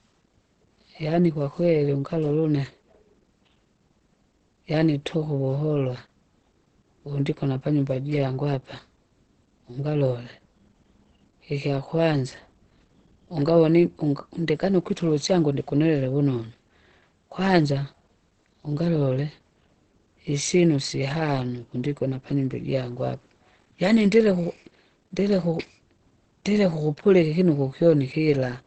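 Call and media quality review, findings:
Muffled, hoarse speech throughout the clip. Nothing above 8.5 kHz. Likely Opus compression in its speech (SILK) mode. Sound fits a wideband stream at around 16 kbps. Encoder drops fine spectral detail to save bits. Damage plainly audible.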